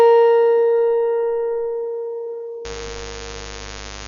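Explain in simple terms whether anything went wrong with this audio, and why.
Dolby Digital compression damage runs through the whole piece of music. It is most likely the cause of the dull, muffled tone. To save space, this kind of encoder throws away the top of the sound, and here nothing survives above about 6.9 kHz. It also gives many parts of the sound too little detail and fills them in with noise, so steady tones pick up a rough, fluttering edge.

Mains buzz comes in at 2.65 s and continues to the end. It is a steady, raspy hum built on the 50 Hz of the electricity supply, clearly quieter than the music. It happens when sharp electrical spikes from something like a dimmer, a power supply or an unshielded cable leak into the audio twice every cycle, bringing a stack of higher buzzing tones with them.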